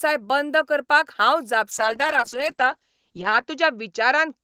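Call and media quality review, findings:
Call bitrate drop from 1.73 s, just after "बंद करपाक हांव", persisting to end. Encoder rate down from 32 to 8 kbps, lowest for 1.72 s. Audio band cut from 20 kHz to 8 kHz: muffled, coarse, watery speech.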